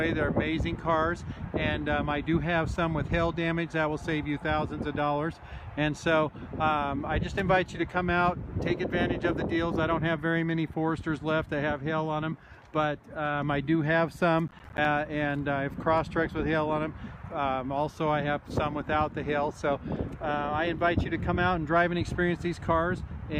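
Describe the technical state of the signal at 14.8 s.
At 14.8 s the signal is in a burst of processor overload crackle running from 14.48 to 14.85 s. Roughly ten short buffers, each around 10 ms, miss their deadlines and drop to silence, giving gritty, clustered tearing rather than one clean dropout.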